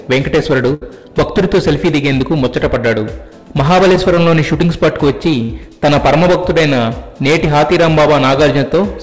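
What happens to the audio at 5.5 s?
A burst of packet loss runs from 5.43 to 5.51 s. The receiver extends the last sound for 62 ms and fades it, then resumes with 60 ms missing.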